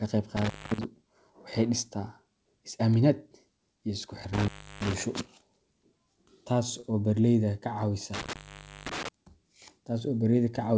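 A loose cable or plug briefly lost contact three times, giving an intermittent contact fault. The speech drops out with crackle at each edge and faint hiss in the gap: 0.37–0.84 s (open about 219 ms), 4.33–4.93 s (331 ms) and 8.14–9.09 s (507 ms).

At 6.80–6.93 s, a packet arrived late and the jitter buffer ran dry, a short stall from a late packet. The receiver stretched the preceding sound by about 33 ms until the data came, then resumed where it stopped. Nothing is lost, but the sound is briefly held, with a slight buzz or dip. The call path's band limit, with nothing above 8 kHz, fits a G.722 codec.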